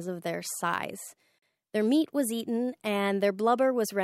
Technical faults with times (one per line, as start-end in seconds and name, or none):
1.38-1.42 Bluetooth stall